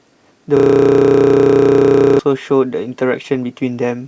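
From 0.57 to 2.19 s the speech locks into a system hang loop. The playback side froze while the hardware kept replaying one 32 ms chunk, which fits a 512-sample buffer, about fifty times over. You hear it as a rough, steady buzz at 31.2 Hz.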